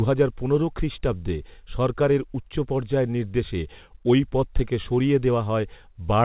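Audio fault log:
No faults found; the speech comes through a call path with nothing above 4 kHz, a narrow band that fits a 64 kbps G.711 mu-law codec.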